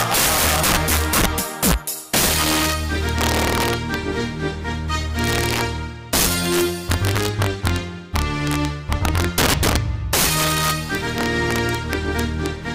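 Integer overflow runs through the whole clip. The signal has been pushed roughly 10 dB past the integer range, and instead of being limited at full scale, every peak that crosses the limit wraps around to the opposite extreme. Only a few percent of samples go over, but each one jumps across the full range at once. The result is a series of violent, sharp cracks on the loudest moments, far harsher and more abrupt than ordinary clipping.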